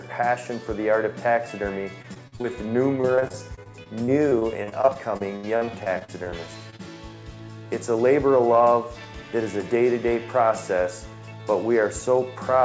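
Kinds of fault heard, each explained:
Repeated packet loss (robotic sound): Over 2.02–2.46 s and 3.02–6.34 s, holes follow one another (5 and 27 gaps, longest 70 ms), each patched by stretching the last sound. Unlike a lone dropout, the repetition makes the audio choppy, with pieces missing, for whole stretches.
Short concealed packet loss: Two isolated holes, at 6.70–6.74 s and 6.76–6.81 s, each about 20 ms of missing audio that the receiver filled by continuing the preceding sound. Each is heard as a brief smear or wobble, not the sustained robotic chopping of repeated loss.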